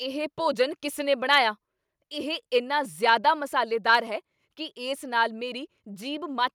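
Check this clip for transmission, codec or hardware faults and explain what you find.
There are two problems here: a couple of clipped peaks and then a small automatic cut in the mic level.

Microphone overload hits twice, from 1.33 to 1.38 s just after "ਭੋਜਨ ਕਿਸ ਨੇ", and again from 3.94 to 3.96 s. The input gain was likely set a bit hot, so those peaks run about 2 dB past the converter's ceiling and get their tops squared off. Only a small fraction of samples are affected, but you still hear a brief crackly, gritty edge on those loud moments.

The microphone volume stepped down at 4.08 s, right before "ਕੀ ਇਸ ਨਾਲ". That is only about 0.1 s after the second clipped peak, so it's likely the call software noticed the overload and lowered the device's input gain in one go. The speech and the background drop together by about 1 dB. It's a subtle but sudden step down in level instead of a smooth fade.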